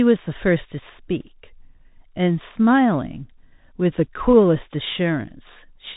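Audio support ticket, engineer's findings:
Bluetooth CVSD headset codec, whole clip. Speech band-limited, nothing above about 3.8 kHz. Scratchy s sounds, granular hiss under everything, loud highs distorting where the 1-bit delta steps can't keep up. Sounds like a 64 kbps link, narrowband headset path.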